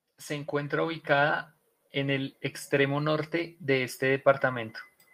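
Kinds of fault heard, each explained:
Automatic gain rising: The gain control judged the input too quiet and kept turning it up. From 0.28 s to 4.8 s the level climbs by about 8 dB. The voice and the background swell together. The rise is slow and steady.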